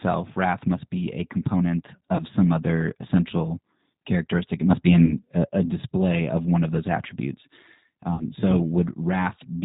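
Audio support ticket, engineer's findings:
Band-limited, slightly rough and synthetic speech throughout, nothing above 4 kHz. G.729 codec (G.729A, 8 kbit/s): speech rebuilt from a vocal tract filter, pitch predictor and sparse pulses. Damage plainly audible.

Stretched dropouts fading out, with weak, distorted speech just after, at 2.16–2.23 s, 5.05–5.13 s and 8.14–8.25 s. VoIP packet loss concealed by the speech codec: about 30 ms, 30 ms and 60 ms missing, fitting one, one and two lost packets. Decoder extrapolated the last pitch and filter with decaying gain, and later frames inherited the error.

Level, background noise included, steps up about 5 dB at 4.70 s, holds until 5.49 s. Sudden gain jump, likely a digital gain change applied without a ramp.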